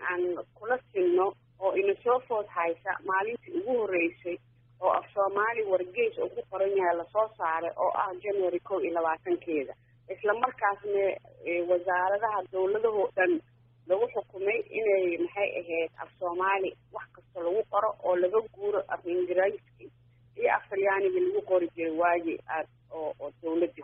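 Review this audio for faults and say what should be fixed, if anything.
Nothing here needs fixing; no faults are audible anywhere in the clip.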